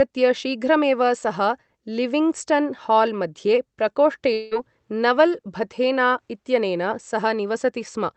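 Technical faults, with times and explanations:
4.33–4.54 s, long network dropout: incoming audio likely stopped arriving for about 0.18 s, and the receiver filled the whole gap by stretching the last bit of speech into a fading, buzzy hiss instead of dropping to silence. When audio resumes, the speech picks up further along, so that 0.18 s stretch of speech is missing. Like the rest of the call, the passage is band-limited to about 8 kHz, which fits an Opus call codec.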